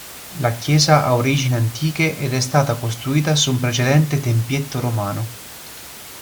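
No faults detected in the speech; the background room noise sits about 18 dB below it and belongs to the recording itself.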